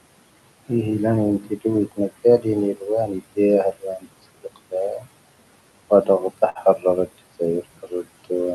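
Right from the start you can hear noise suppressor artifacts. The room noise, which sits about 16 dB under the speech, gets pushed down by about 20 dB wherever the suppressor decides a band is just steady noise. So the background dips in the gaps and swells back up underneath the talking.

That same suppressor also shows speech cut by the noise suppressor, where it mistakes bits of speech for noise. Between 1.4 and 3.38 s, roughly 400 ms of quieter sounds get dragged down as far as about 19 dB. It happens again from 3.72 to 4.06 s and from 4.43 to 5.05 s, a bit over a tenth of a second each time, dropping about 19 and 17 dB. The soft consonants and word tails just sort of get swallowed. From 5.9 s right through to the end it keeps happening, with drops of about 20 dB.

At 6.49 to 6.58 s there's a burst of packet loss. The receiver papers over about 56 ms by stretching out the last bit of sound and fading it, so you get a brief held buzz or hiss. 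Then it jumps ahead, and about 60 ms of the original audio is simply gone.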